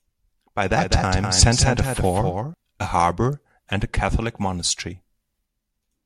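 A speech recording with a doubled audio track from 0.76 to 2.54 s: a second full-band copy of the same speech runs around 200 ms behind the original and about 5 dB quieter, with no decay or room colouring. It appears and vanishes abruptly, dropping out just before "a harbour and a". This is likely a second capture of the signal through a slower path, mixed back in out of step with the direct one.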